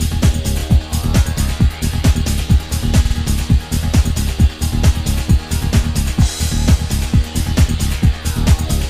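Repeated frames occur at 0.59 s, 3.05 s and 6.60 s. Each time, a block of compressed audio plays again. The blocks are 26 ms played once more, 52 ms played twice more, and 26 ms played twice more. Each repeat is heard as a short stutter, and together they lengthen the audio by about 0.18 s.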